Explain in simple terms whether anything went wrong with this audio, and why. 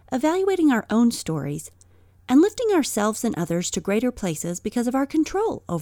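Nothing went wrong here: I hear no dropouts, clicks, distortion or glitches anywhere in this speech recording.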